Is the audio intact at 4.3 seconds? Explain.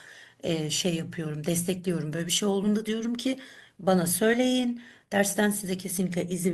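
No. Between about 4.33 and 4.35 s a compressed frame is skipped. Roughly one 20 ms frame never reaches the output, either missing from the stream or rejected by the decoder as damaged, so the speech jumps ahead by about 20 ms. That sets it apart from a dropout: nothing goes silent, and the sound simply lurches forward.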